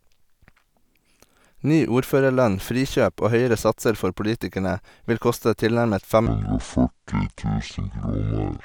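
From 6.26 s to 8.64 s, just after "politikerne vil koste tilnærmet", a section at the wrong speed appears, likely from a mismatched playback clock running the audio at 0.531 times its recorded rate. The speech abruptly slows and drops about ten semitones, turning deep and dragged.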